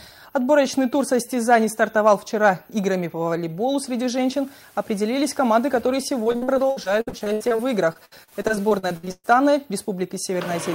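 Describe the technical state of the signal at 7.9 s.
At 7.9 s the signal sits inside a stretch of repeated packet loss (robotic sound) running from 6.23 to 9.27 s. Short dropouts of up to 123 ms recur throughout and are patched by extending the preceding sound, covering about a third of the stretch and leaving it choppy with pieces missing.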